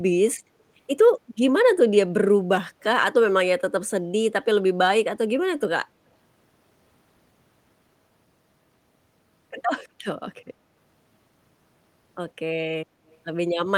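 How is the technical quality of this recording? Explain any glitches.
One glitch is present: a short echo leak near the end of the speech, from 13.08 to 13.16 s. A very faint copy of the speech returns 141 ms late, far quieter than the direct sound. The likely cause is a loudspeaker on the far side whose echo canceller let some of its microphone pickup back into the call.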